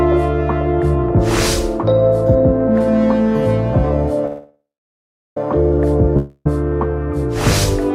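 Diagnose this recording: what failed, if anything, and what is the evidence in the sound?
A call audio freeze runs from 4.26 to 5.37 s. The last sound stretches into a fading buzz, then about 0.73 s of near silence, and the audio resumes exactly where it stopped, now 1.1 s late. A spectrogram shows smeared horizontal bands decaying into a blank gap. The likely cause is network delay draining the jitter buffer.

A long network dropout spans 6.17 to 6.46 s. The sound again trails off as a brief decaying buzz, with only about 30 ms fully silent, but when audio returns, 0.28 s of it is gone. The waveform shows a short fading plateau, then an abrupt jump, which points to likely packet loss in the network.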